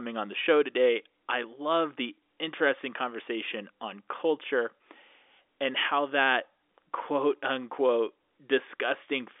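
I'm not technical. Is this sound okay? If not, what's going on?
Yes, nothing stood out on listening to this speech beyond the narrower, slightly boxy sound you'd expect from an ordinary phone line.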